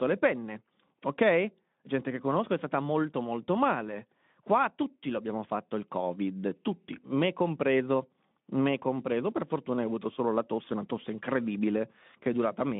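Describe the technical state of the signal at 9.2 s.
At 9.2 s the audio is intact, with no fault at that moment, and the speech carries the narrowband, telephone-like character of its Speex path at 15 kbps, with only light codec roughness and nothing above about 3.8 kHz.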